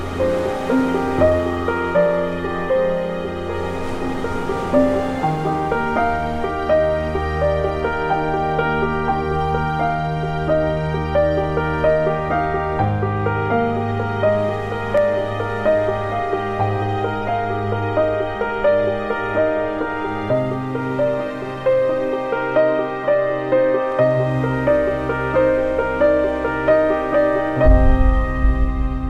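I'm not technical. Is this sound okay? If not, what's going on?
No. Two single sharp clicks, at 14.98 and 23.92 seconds, are likely dropped samples. A tiny sliver goes missing, so unlike a dropout, no sound vanishes.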